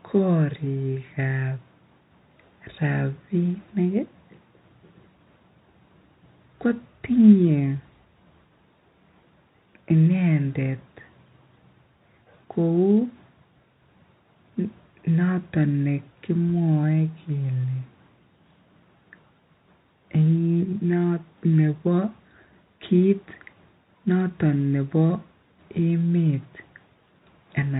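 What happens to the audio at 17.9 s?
Nothing goes wrong at 17.9 s: the speech carries straight through that moment with no dropout, click or distortion, keeping the same narrow telephone-band sound it has under G.711 coding.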